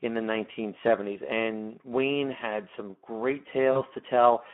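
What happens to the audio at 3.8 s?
Right after "had some great", from 3.71 to 3.81 s, there is VoIP packet loss concealed by the speech codec. About 40 ms of audio went missing, which fits two lost 20 ms frames. The decoder filled the gap by stretching the last pitch and filter into a buzzy tone or coloured noise that fades out. That fading sound, rather than a silent dropout or a click, is what sets it apart from a plain gap, and the sound stays weak for a moment after the packets return. The Speex codec runs underneath the whole clip at around 11 kbps, giving a hoarse, noisy quality within a 200 Hz to 3.4 kHz band.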